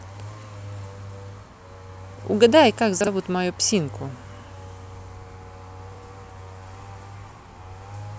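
Speech, with two brief jumbled moments caused by chunks out of order, one at 3.01 to 3.07 s and another at 5.92 to 5.98 s. In each, a 32 ms block of audio plays one chunk late, after the block that should follow it, so nothing is missing but the sequence is swapped. The three hard joins this creates produce a momentary garbled quality across a window of about 64 ms.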